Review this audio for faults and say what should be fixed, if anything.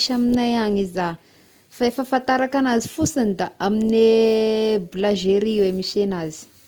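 Transcoding between lossy codecs, throughout the speech: two layers of coding artefacts are heard together, which fits a likely MP3 encode at 96 kbit/s later re-encoded to Opus at 24 kbit/s. To prevent it, encode once from the original lossless source directly to the final codec.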